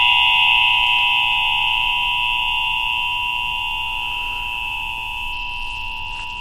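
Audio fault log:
5.32–6.41 s, Bluetooth SBC bit pool drop: the wireless link appears to have become congested, and the sender cut the SBC bit pool to keep the stream going. The sound fits a fall from a bit pool around 31 to about 12, near 88 kbps. With that few bits, the highest sub-bands get little or nothing and the rest are coarsely quantised. The treble turns dull and a gritty noise rises, lasting to the end of the audio.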